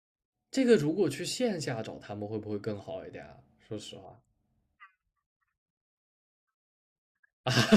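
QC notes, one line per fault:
No technical faults are audible in the speech recording, with steady level and an unbroken signal all the way through.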